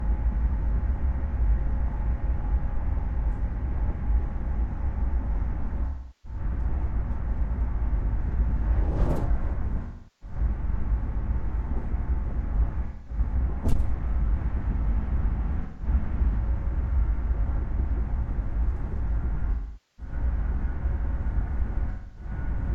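AAC frame loss with concealment occurs at 2.70–3.06, 5.85–6.40, 9.82–10.36, 12.85–13.18, 15.63–15.86, 19.51–20.13 and 21.89–22.30 s. The decoder fills each gap from the last good spectrum, producing smeared, phasey patches. The first is scattered brief dropouts. The longest, about 470 ms, sags toward silence. On a spectrogram these show as blurred, frozen-looking bands. In the waveform the longer ones appear as dipping envelopes.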